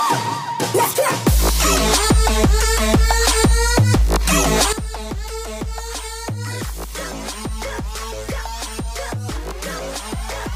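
A sudden gain jump at 4.73 s drops sound and background noise together by about 12 dB, likely a gain setting applied abruptly without a ramp.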